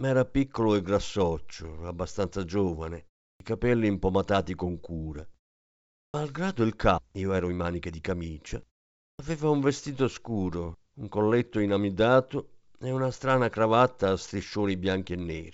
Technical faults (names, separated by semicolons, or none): clipped start after a pause; skip ahead; jitter buffer speed-up